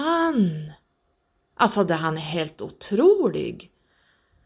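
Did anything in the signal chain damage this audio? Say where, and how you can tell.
No, nothing along the signal chain audibly damaged this speech recording at any stage.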